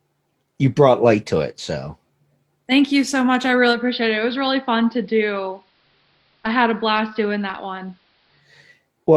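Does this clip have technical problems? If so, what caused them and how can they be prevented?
Yes. After "you so much I", from 3.7 to 8.51 s, the speech turns dull and faintly hissy, dropping about 1 dB, with hiss well below the signal. This is digital radio blending to analogue: the receiver lost the digital stream and cross-faded over 140 ms to the station's AM broadcast, then back. Better reception, from a stronger antenna or a different position, keeps the digital signal locked.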